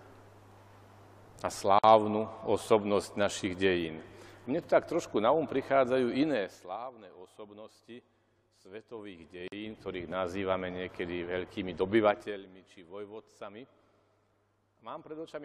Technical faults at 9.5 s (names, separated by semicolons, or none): zipper noise; gap at a join of encoded pieces